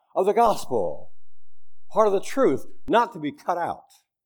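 At 0.46 s the waveform's zero line abruptly shifts, a DC step of about -28 dBFS, and the offset holds until 2.88 s, when it drops back to centre. Each edge is heard as a low thump beneath the speech, which continues unchanged. On a waveform the whole trace sits visibly off-centre between those times. A spectrogram shows a brief broadband smear at each transition and added energy at 0 Hz in between.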